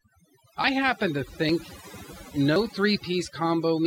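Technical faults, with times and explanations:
Throughout: overdone noise removal. The background sits at near silence, dotted with twinkling specks. A noise reduction process was pushed too hard here. Any frequency band close to its noise estimate gets pulled far down or switched off. Quiet parts of the voice fall below that line and vanish with the noise. Isolated bands that survive are what produce the twinkling.
0.64 s, 1.49 s and 2.56 s: dropped buffer (overrun). Each is a sudden jump forward in the speech, with no gap of silence. The first lands just before "happen to", the second just after "happen to". Each skip loses roughly 40 ms of sound. The likely cause is the recording program failing to collect its samples before the hardware overwrote them. The audio on either side of the missing piece is then joined directly.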